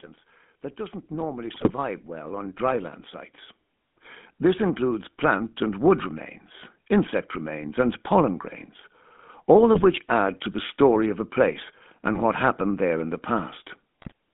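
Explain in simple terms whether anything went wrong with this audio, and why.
Several things went wrong. The whole recording has a buzzy, gravelly roughness, and the voice sounds thin, as if heard through an old mobile phone. That is the GSM full-rate codec, the original digital mobile phone coding. It doesn't send the actual sound wave. It sends a simplified model of the voice, driven by a coarse stream of pulses, and it drops everything above about 3.5 kHz. Crisp, airy parts of speech disappear and the rough buzz is left.

From 0.76 to 3.03 s the voice and the background noise behind it swell louder together, and they swell again, more gently, from 3.88 to 5.89 s. This is automatic gain rising. A volume control built into the system decided the input was too quiet and slowly raised the level. Because it turns up everything at once, the noise grows along with the voice.

In three short moments the voice breaks into squawks, pops and a gargling sound: 1.54 to 1.71 s, 9.74 to 9.87 s, and 14.0 to 14.12 s. 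These are GSM bit errors. A weak mobile connection corrupted some of the data before it was decoded. The damaged values describe the tone and loudness of the voice, so the decoder briefly rebuilt a garbled, distorted sound.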